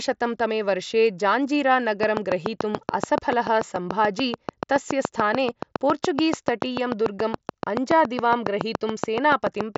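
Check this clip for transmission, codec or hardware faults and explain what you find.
One fault: a train of clicks from 2.03 s to 9.77 s, sitting on top of speech that is band-limited to about 7.7 kHz by the mSBC headset link. The clicks come regularly at about 7 per second, around fifty in all, peaking well above the speech. They are likely from equipment interference or a struggling interface. On a waveform they show as evenly spaced spikes, and on a spectrogram as thin vertical lines that persist through the pauses.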